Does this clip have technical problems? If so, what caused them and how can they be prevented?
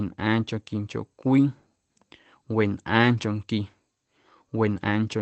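Yes. There are three lost packets rebuilt from error correction, at 1.27 to 1.29 s and 3.17 to 3.23 s. No gaps are heard. Instead, 20 ms and then 40 ms of the speech turn briefly rougher and noisier. That points to one dropped packet, then two separate ones. Each time, the next packet's low-bitrate Opus copy filled in. Reducing network packet loss, for example with a wired link or less congestion, would prevent it.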